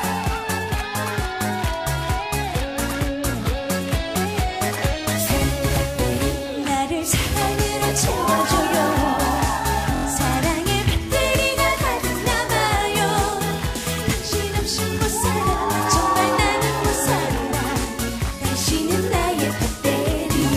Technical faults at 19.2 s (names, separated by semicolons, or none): repeated frames